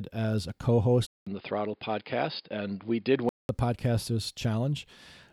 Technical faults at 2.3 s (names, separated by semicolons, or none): input switched to a poorer device